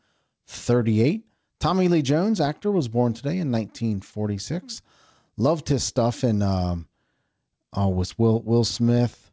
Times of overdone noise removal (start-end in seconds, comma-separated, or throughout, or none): none